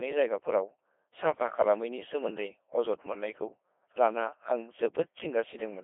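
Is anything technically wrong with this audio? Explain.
Yes. Codec 2 vocoder damage runs throughout. Rather than preserving the waveform, the decoder rebuilds the speech from sine waves using only pitch, voicing, energy and a spectral envelope, at a rate that fits 2.4 kbit/s. The heavy damage makes it robotic and buzzy, with a 300 Hz to 3.5 kHz radio band and nothing above 3.7 kHz.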